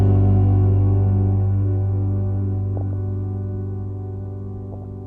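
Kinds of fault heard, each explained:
MP2 compression: The whole clip sounds dull and muffled, with a gurgling, grainy roughness and upper detail flickering in and out. This is likely MPEG Layer II coding starved of bits, switching off high sub-bands and coarsely quantising the rest, consistent with about 80 kbps.
DAB burbling: Brief bursts of burbling noise blips sit over the sound at 2.77 to 2.93 s and 4.72 to 4.84 s, the second rougher. Bit errors escaping error correction corrupt samples, putting short noise blips into single sub-bands, and scale factors, making sub-bands jump in level for up to a frame.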